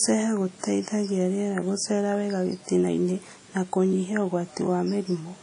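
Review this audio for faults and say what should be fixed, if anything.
The speech carries plainly audible codec damage from start to finish. Nothing is present above 10.1 kHz, so the top end sounds dull and cut off. Consonants and vowels ring and smear, and a washy hiss rises and falls with the voice. This is likely WMA compression. A transform encoder at a low bitrate spreads quantisation noise across long blocks and drops weak detail. The damage points to roughly 32 kbps. To prevent it, capture the original uncompressed or encode at a much higher bitrate.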